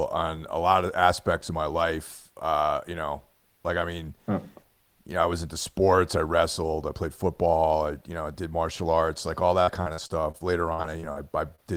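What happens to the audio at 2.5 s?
Nothing goes wrong at 2.5 s: the speech runs on intact through that moment, with no dropout, click, distortion or other fault.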